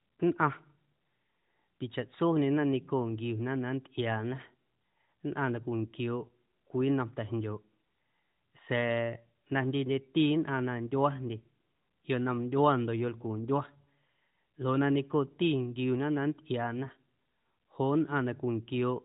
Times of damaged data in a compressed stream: none

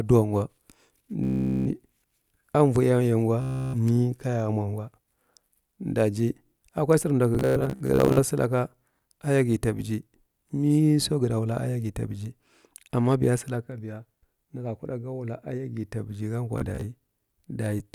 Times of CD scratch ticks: none

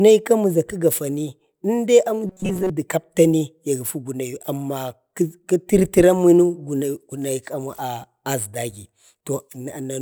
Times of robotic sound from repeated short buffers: 2.27-2.70

